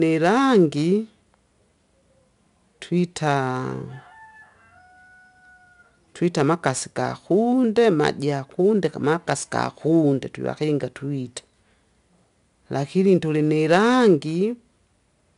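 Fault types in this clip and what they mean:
4-bit ADPCM compression: each sample is coded as a small 4-bit step from a predicted value, so a plainly audible gritty hiss rides on the speech and rises and falls with its loudness, with roughness on sharp onsets where the step size lags behind. Nothing is heard above 10.6 kHz, which fits a sample rate near 22 kHz. Plain low-bit quantisation leaves a steady noise floor, and perceptual codecs swirl rather than hiss.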